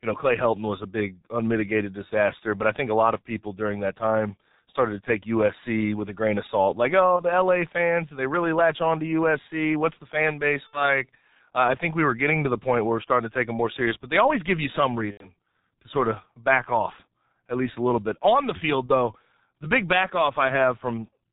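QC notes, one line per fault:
Throughout: G.723.1 codec. The speech is band-limited with nothing above 4 kHz, so it sounds muffled. Consonants smear and the voice has a hoarse, grainy edge. The 30 ms frames and slowly updated voice model cannot follow fast spectral changes, and the heavy degradation fits the low 6.3 kbit/s mode. Sibilants and plosives lose their definition.
7.17–7.24 s, 10.67–10.82 s, 15.11–15.29 s, 18.86–18.92 s: VoIP packet loss concealed by the speech codec. In each gap the decoder repeats its last pitch and filter state at falling gain, so the speech stretches into a buzzy tone or coloured noise that fades. The missing audio spans about 30 ms, 60 ms, 90 ms and 30 ms, which fits one, two, three and one lost 30 ms frames. The voice stays weak and distorted briefly after each one while the decoder's state rebuilds.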